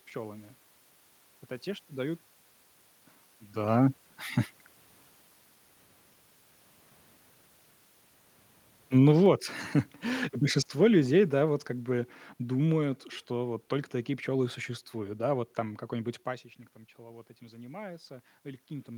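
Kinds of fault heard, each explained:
Automatic gain falling: gain eases down about 4 dB from 10.07 to 11.7 s, and the room noise sinks with the speech, unlike a talker moving away.
Automatic gain rising: after the input drops about 16 dB near 16 s, gain climbs from 16.27 s to the end, swelling room noise along with the speech.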